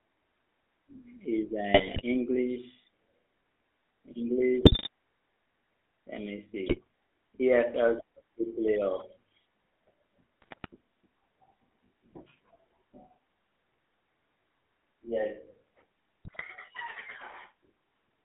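GSM full-rate codec damage runs from the start to the end of the speech. The band is confined to roughly 250 Hz to 3.4 kHz, and the codec rebuilds the voice from a short-term vocal tract filter excited by a sparse, regularly spaced pulse train, discarding most of the excitation detail. The result is a plainly audible buzzy, gravelly roughness laid over every syllable, which fits the 13 kbps full-rate coder.

GSM bit errors break through at 1.74 to 2.02 s, 4.62 to 4.88 s, 6.66 to 6.79 s, 10.42 to 10.68 s and 16.25 to 16.43 s. Corrupted bits reach the decoder, so the filter, pitch and gain values it uses for those stretches are wrong. The spectrum bends and the level jumps, and each burst comes out as squawks, pops and gargling lasting about 0.1 to 0.3 s, which points to a bit error rate of roughly 1.5 to 4 percent.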